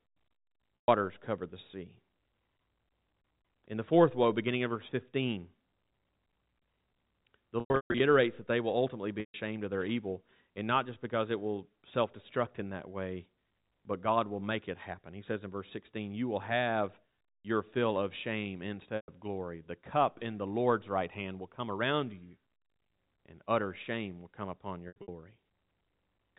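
Speech heard through a telephone-band channel with nothing above 4 kHz is interrupted five times by packet loss with pitch repetition: at 0.76–0.88 s, 7.6–8.0 s, 9.20–9.34 s, 18.96–19.08 s and 24.88–25.08 s. Each gap sounds like a brief held, buzzy tone that fades toward silence before the speech cross-fades back in. The receiver loops the last pitch period to cover missing audio, up to 140 ms at a time. The gaps at 7.6 s and 24.9 s are scattered bursts, 300 ms lost across 400 ms and 160 ms across 200 ms.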